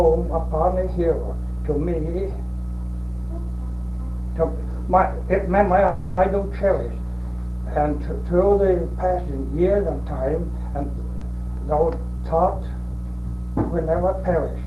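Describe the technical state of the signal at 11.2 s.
At 11.2 s there is a short concealed packet loss, from 11.17 to 11.24 s: about 40 ms of audio never arrived, and the decoder filled it by extending the preceding sound before blending back. Unlike a true dropout, there is no silence, only a brief smeared wobble.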